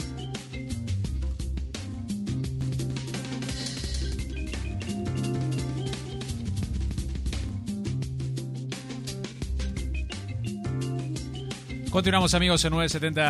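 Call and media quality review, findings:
Doubled audio track, 2.61–7.49 s: every sound repeats about 0.3 s later, a few dB quieter, full-band, no decay or room colour, cutting in and out abruptly. Likely a second capture path or misaligned edit layering a fixed-delay copy.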